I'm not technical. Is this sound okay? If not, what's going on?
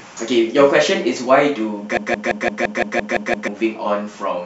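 No. From 1.97 to 3.48 s the speech gets stuck in a broken-record loop: the same 0.17-second scrap plays nine times in a row, each copy identical. That sameness sets it apart from ordinary stuttering, and the speech that belonged there is gone. A stalled player or stream is the likely cause.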